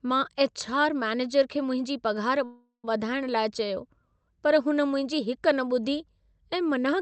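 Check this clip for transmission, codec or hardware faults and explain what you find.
One transmission fault stands out in this speech clip, heard through an Opus call path whose content stops near 8 kHz.

From 2.44 to 2.85 s, right after "खे मुंहिंजी पघार", there is a call audio freeze, likely from delayed packets draining the jitter buffer. The receiver stretches the last sound into a fading buzz or hiss, then about 120 ms of silence, before speech resumes with nothing lost but a 393 ms delay. On a spectrogram, smeared, flattened harmonics thin to a blank band. The waveform shows a decaying envelope and a flat gap.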